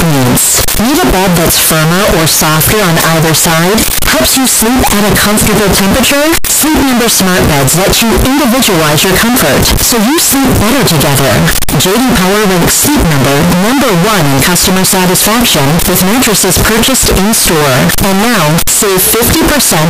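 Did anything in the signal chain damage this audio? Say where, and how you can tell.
Yes. The speech is buried under loud, harsh distortion from start to finish, with quiet stretches just as loud as the rest. That points to sample-format conversion, likely a signed and unsigned mix-up in 16-bit samples: the flipped top bit turns every zero crossing into a full-scale jump.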